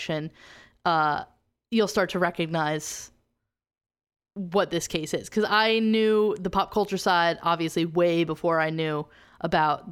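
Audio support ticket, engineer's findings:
Single sharp click at 4.61 s in the speech, likely dropped samples: roughly one sample missing, waveform steps straight to a later value. Thin vertical line in spectrum, no audible gap, so not a dropout or muted stretch.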